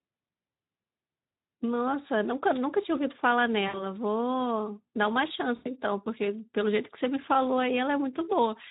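Speex codec damage runs through the whole speech clip. The coding is plainly audible. The voice sounds hoarse and noisy, because the low-rate CELP coder has too few bits to model the excitation properly. The texture fits a bitrate of around 11 kbps. Any content above 4 kHz is thin and hissy, a shaped noise fill rather than real detail.

At 3.67 s there is VoIP packet loss concealed by the speech codec, lasting until 3.83 s. Packets went missing and the decoder repeated its last pitch and filter while lowering the gain. The result is a short, stretched sound that fades out. The gap sounds like about 60 ms of lost audio. At 5.55 s a second concealment follows, ending at 5.67 s. The gap sounds like about 100 ms of missing audio. After each gap the voice stays weak and smeared for a moment before recovering.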